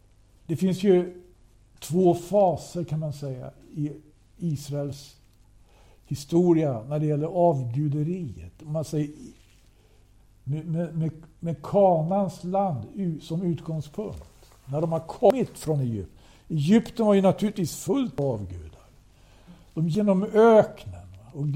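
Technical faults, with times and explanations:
15.30 s, 18.18 s and 19.95 s: compressed frames skipped. At each point the audio jumps forward, dropping about a fifth of a second at the first two and nearer a third at the last. The jumps fit whole frames of roughly 93 ms going missing, about two at a time and three at the end.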